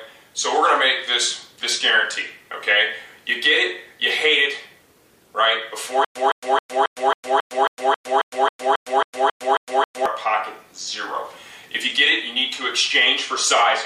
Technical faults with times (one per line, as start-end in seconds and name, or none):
6.05-10.06 stutter with silent gaps